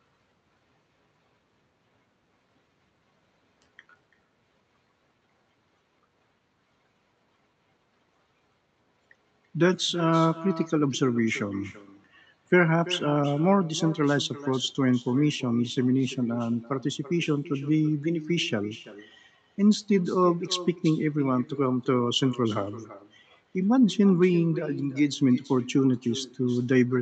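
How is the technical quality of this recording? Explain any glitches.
The main problem is an echo that runs through the whole call, on top of the call codec's usual coding noise and a high end that stops at about 8 kHz.

Echo with no canceller: for the entire clip, every phrase comes back roughly a third of a second later as a quieter, thinner copy, about 17 dB down. The far end's loudspeaker is feeding its microphone, and nothing is subtracting that return before it travels back.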